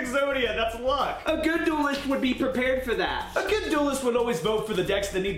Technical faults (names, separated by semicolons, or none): none